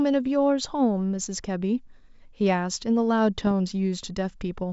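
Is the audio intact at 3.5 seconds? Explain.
No. At about 3.47 s there is a short burst of bit errors on an ADPCM link. The flipped bits reach the G.722 decoder, which otherwise carries the wideband speech cleanly, and throw its step size and predictor off, so the fault is a pop with a brief rough tail and a jump in level. A packet-loss dropout would sound different, as a gap or a smoothed-over fill rather than this harsh, ringing burst.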